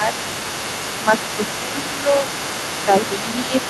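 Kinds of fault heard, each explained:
Speech suppressed in double talk: The talker's level dips briefly, by roughly 5 dB, at 0.0 to 0.11, 1.05 to 1.11, 1.36 to 1.41, 1.68 to 1.84, 2.02 to 2.27 and 3.19 to 3.54 s. The longest dips last a few tenths of a second. This is likely an echo canceller that, with both sides talking at once, could not separate near speech from loudspeaker echo and attenuated both.
Other side's voice leaking through: A second voice runs under the main speech for the whole clip, sitting roughly 10 dB below the talker. The likely cause is the far end playing from the talker's loudspeaker back into the microphone, with the echo canceller leaving a residual that was never fully removed.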